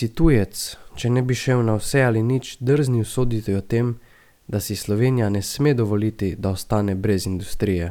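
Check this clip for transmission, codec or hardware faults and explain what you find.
The speech signal comes through intact, with nothing in its technical state that points to a fault anywhere along its path.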